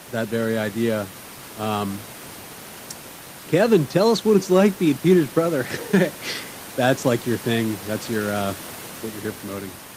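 No technical faults are audible in the speech; the only background is the room's own noise, sitting about 23 dB below the voice and belonging to the recording rather than to the system.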